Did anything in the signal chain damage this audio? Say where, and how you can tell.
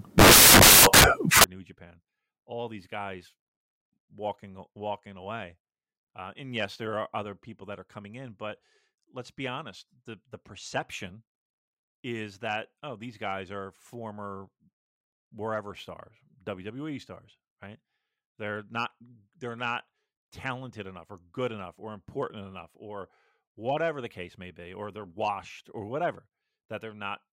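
Yes. The opening of this speech clip, from 0.0 to 1.44 s, is damaged at the sample-format conversion stage, where samples are built from the wrong bytes. For that stretch the reader assembles each sample with the bytes misaligned or in swapped order, so the rapidly changing low bits land in the most significant position. What should be speech comes out as loud, broadband white noise. On a spectrogram this shows as a flat, dense wash across all frequencies. On the waveform it shows as a dense, shapeless block before the audio turns normal.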